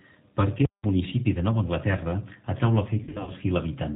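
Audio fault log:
throughout, G.729 codec: speech rebuilt at 8 kbit/s from a vocal tract filter and sparse pulses, cut off above 4 kHz, sounding plainly rough and synthetic.
0.65 to 0.84 s, invalid numbers at full scale: a loud pop opens and closes a 186 ms silent stretch, where the output was pinned at its extreme value, which fits an 8192-sample block.
3.03 to 3.31 s, VoIP packet loss concealed by the speech codec: about 160 ms went missing across 240 ms, with the longest gap 60 ms, fitting roughly eight 20 ms packets. The decoder stretched its last pitch and filter into a fading buzz or coloured noise, and the speech stays weak afterwards.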